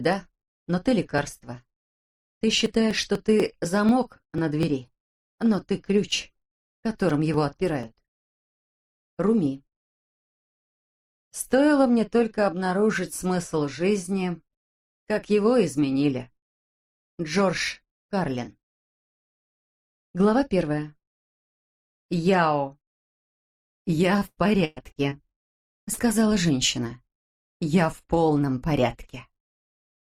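From 1.18 to 8.57 s, periodic USB or driver dropouts skip roughly 4 ms of audio every 0.25 s, about thirty times, producing evenly spaced ticks over the signal.

Between 24.19 and 25.49 s, repeated packet loss leaves eight gaps, the longest 116 ms, patched by extending prior sound; the result is choppy and robotic.

Two short concealed packet losses follow, at 25.85–25.89 s (20 ms missing) and 25.93–25.99 s (40 ms), each heard as a brief smear where the decoder filled the hole.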